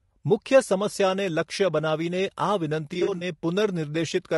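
It's a speech clip, and the whole thing has a rough, grainy texture, with noise filling in between the harmonics and a top end that sounds thin and a bit synthetic. That's plainly audible damage, likely from low-delay AAC compression, AAC-ELD, the kind video calls use. The damage level points to a fairly low bitrate, around 32 kbps. On top of that, between 2.93 and 3.23 s there's AAC frame loss with concealment. Bits of the signal drop out in short bursts scattered across that stretch, none much longer than about 40 ms, adding up to roughly 140 ms missing. The decoder patches each gap from the last good spectrum, so that stretch comes out smeared, noisy and a little phasey rather than going silent.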